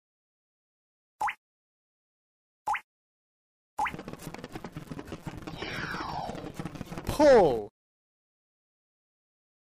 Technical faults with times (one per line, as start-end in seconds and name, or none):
0.00-9.63 filter restarted on every block